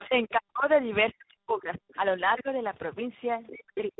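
Throughout, the speech sounds rough, muffled and warbly, with nothing above about 3.8 kHz. This is tandem speech coding: three speech coders in a row, in a chain that fits G.726 ADPCM, then G.729A, then G.726 again, each re-coding the previous one's degraded output.

From 0.0 to 0.05 s a faint second voice slips in, about 20 dB below the speech. This is the other side's voice leaking through, likely loudspeaker echo the canceller failed to remove. It recurs, brief, at 1.88 to 1.97 s (about 30 dB down), 3.47 to 3.51 s (about 25 dB down) and 3.76 to 3.8 s (about 15 dB down).

Also between 0.0 and 0.7 s, and again from 3.51 to 3.98 s, the speech dips and partly drops out, by as much as around 40 dB, over about 0.4 s in each stretch. This is speech suppressed in double talk: with both sides likely talking at once, the echo canceller turned the talker down along with the echo.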